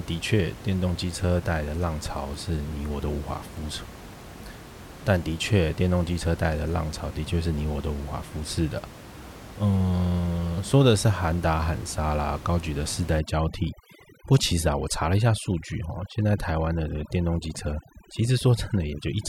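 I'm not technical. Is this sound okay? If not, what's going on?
No, not all the way through. From about 13.19 seconds to the end, there's overdone noise removal. A cleanup tool was set too strong, so it shuts off bits of sound whenever they're close to what it thinks is background hiss. The quiet parts of the speech get swallowed too, leaving a dropped background between phrases that breaks up into little twinkly specks. The room noise you hear earlier is just the room itself, not a fault.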